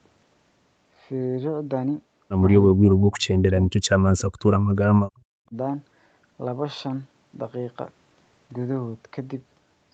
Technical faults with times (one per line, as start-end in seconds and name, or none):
2.72-4.63 speech suppressed in double talk
4.97-5.56 speech suppressed in double talk